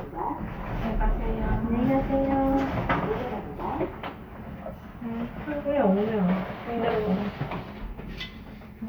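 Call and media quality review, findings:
No faults found in this recording of sounds. Nothing heard calls for follow-up on this ticket.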